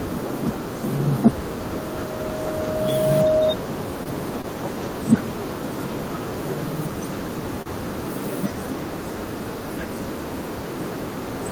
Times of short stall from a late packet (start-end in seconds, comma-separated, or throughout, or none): 4.03-4.09, 4.42-4.47, 7.62-7.69